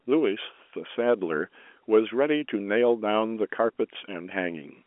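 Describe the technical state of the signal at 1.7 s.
At 1.7 s the audio is intact, with nothing at that moment beyond the narrow telephone band of G.711 A-law coding, which leaves nothing above about 3.7 kHz.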